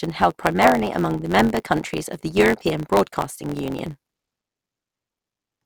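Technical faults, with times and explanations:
Throughout, block size mismatch (truncated): the speech carries a steady buzz near 92 Hz and runs about 1.07 times faster than normal, with its timbre essentially unchanged. One stage hands over longer blocks than the next stage takes in, which fits 512-sample blocks being written, so the tail of every block is discarded. Each cut leaves a discontinuity, and their regular repetition forms the buzz, while the missing slices shorten the timeline without resampling the pitch.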